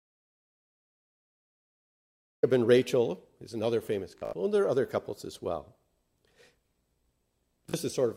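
The audio opens in dead digital silence, with no room tone at all, until it cuts in mid-flow at 2.43 s. That's an audio dropout to silence that was already under way when the clip starts. It's most likely an input that was lost, through a disconnected device, a failed link or a mute, while the recorder kept writing silence, so whatever happened in those first seconds is simply gone. Later there's Bluetooth stutter, where the receiver keeps replaying its last little slice of audio while packets fail to arrive. The first burst runs from 4.18 to 4.33 s, with about 112 ms of sound lost across roughly 150 ms and a longest run near 75 ms, so it comes out as a short machine-gun buzz. That fits around six lost packets. A shorter hiccup hits at 7.70 to 7.74 s, with about 37 ms missing, which points to a couple of packets. Each time the audio picks up further along, as if it had carried on playing underneath.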